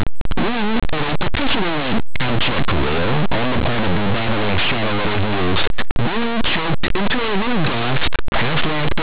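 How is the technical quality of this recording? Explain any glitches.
Poor: the speech is buried under heavy distortion for the whole clip. The underlying coding, plain 8-bit audio, is decoded as mu-law instead of as linear samples.

Linear audio read as companded, throughout: plain linear 8-bit samples are being expanded as though they were mu-law codes. Samples sitting just to one side of zero map to the largest output values, while those just across zero stay tiny. Many quiet moments therefore turn very loud, producing a harsh, very loud distortion. On a waveform it shows as a nearly solid, dense block. A spectrogram shows broadband energy smeared across the whole band instead of clear harmonics.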